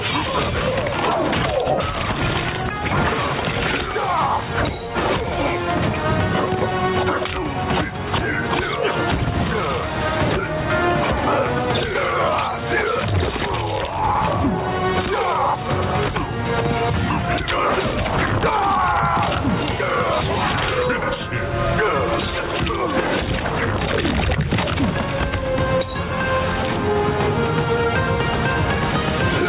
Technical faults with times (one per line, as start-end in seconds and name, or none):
0.00-29.48 gain pumping